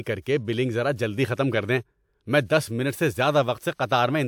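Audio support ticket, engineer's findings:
Short hiss just ahead of a sharp onset, 3.74–3.79 s; attack sounds softened, smeared, with the hiss spreading about 55 ms before it. Pre-echo. Probable component: transform codec stage.

Mechanism: quantisation noise spread evenly across the coding block. The onset falls late in the block, so noise sized for the loud attack also fills the quiet stretch before it.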